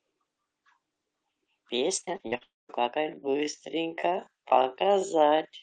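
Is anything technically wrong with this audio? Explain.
Yes, there are three faults, all from around the middle of this speech clip onward.

Repeated packet loss (robotic sound), 2.01 to 2.43 s: five gaps, the longest 45 ms, are patched by repeating prior audio. About a third of the span sounds choppy, with smeared, repeated blocks on a spectrogram.

Long network dropout, 2.43 to 2.71 s: the concealment buzz fades to near-silence for about 210 ms, likely from a network outage. The waveform shows a flat gap and speech resumes with audio missing.

Time-stretched section, 2.92 s to the end: the speech abruptly slows to about 0.57 times normal speed while keeping its pitch, likely from time-stretching software. It drags, and the spectrogram shows stretched syllables.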